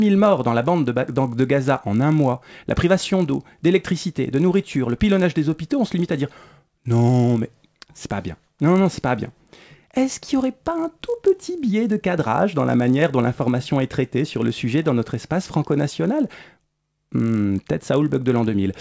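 A sample-rate converter that restarts on every block damages this speech recording from start to finish. Each 20 ms block is converted in isolation, seemingly from 24 kHz down to 16 kHz, so at every block edge the filter lacks the real neighbouring samples and leaves a small error. Those errors repeat at 50 Hz, producing a low buzz that rides on the speech whenever there is sound and vanishes in the pauses.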